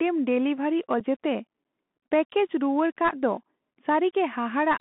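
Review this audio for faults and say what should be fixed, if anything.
The speech is dull and boxed-in throughout, with nothing audible above about 3.5 kHz and little below 200 Hz. Sibilants come out scratchy, loud bright sounds break up, and a fine granular hiss sits under the voice. This is the Bluetooth CVSD headset codec. It codes each sample as a single up-or-down bit whose step size adapts, and sharp transients outrun that step. The sound fits a 64 kbps narrowband link. Prevent it by using a wideband headset profile (mSBC or LC3) or a wired microphone.

At 1.00 s there is a brief hole of about 7.5 ms with abrupt edges, heard as a small click or dropout. Right after it the sound returns quieter for a moment while the codec's step size rebuilds. This is unconcealed Bluetooth headset packet loss. Roughly a single voice packet between headset and phone failed to arrive, and silence or an idle pattern filled the gap with no concealment. 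Prevent it by reducing radio interference and distance, or by enabling packet loss concealment on the receiving side.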